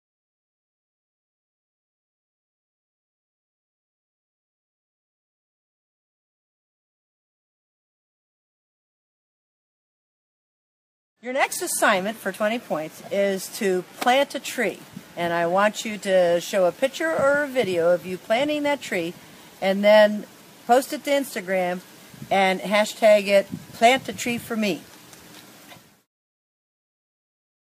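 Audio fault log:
11.52 to 11.56 s, chunks out of order: two 20 ms chunks trade places here, so one piece of audio turns up a chunk late, right after the one that should have followed it. Nothing goes missing, but the swap leaves three hard joins in about 40 ms, so you get a brief scrambled stutter instead of a smooth run.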